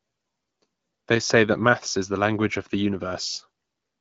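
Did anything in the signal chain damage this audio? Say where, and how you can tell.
No, nothing stood out on listening; the speech comes through the AMR wideband (HD Voice) path with its content ending around 7.4 kHz, as that codec's bandwidth would predict.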